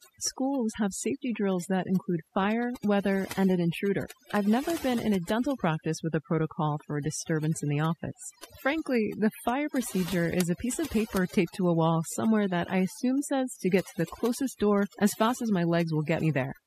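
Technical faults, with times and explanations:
Throughout: overdone noise removal. The noise reduction is set far too strong for this speech. Frequency bands near the noise estimate are pulled down or cut, taking quiet parts of the voice with them. The background drops and breaks up into twinkling specks.
16.20 s: compressed frames skipped. Just after "as fast as my", the audio jumps ahead by about one frame, roughly 20 ms of sound. The skip fits a 24 ms frame length.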